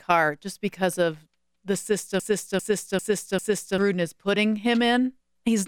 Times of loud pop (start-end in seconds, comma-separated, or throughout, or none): none